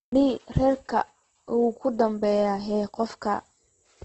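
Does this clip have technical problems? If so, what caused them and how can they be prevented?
Yes. Throughout, the speech was likely squeezed through Opus compression at a very low rate, which fits about 12 kbps in music mode: band energies survive but fine detail is refilled with noise, so the speech sounds grainy and rough, with nothing above 8.1 kHz. Encoding at a higher bitrate, or in the speech mode, would prevent this.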